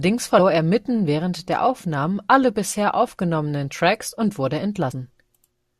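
At 0.38 s, just before "er mitten während der", the speech lurches forward, losing roughly 70 ms. At 4.91 s, right after "und wurde", a similar jump drops roughly 100 ms. Both are compressed frames skipped: the decoder never played a few whole frames, about three and four, consistent with a 21.3 ms frame length.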